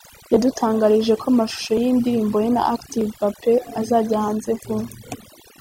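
Speech with overdone noise removal throughout: narrow bands vanish, leaving twinkling specks, unlike gating's whole-signal cut-outs.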